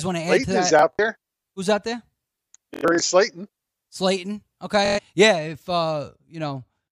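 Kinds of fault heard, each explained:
Bluetooth stutter: packets dropped or arrived late, so the receiver kept replaying its last short slice, giving a buzzy machine-gun repeat. It hits around 0.79, 2.74 and 4.86 s, the middle burst longest at about 0.29 s, and the speech then jumps ahead afterwards.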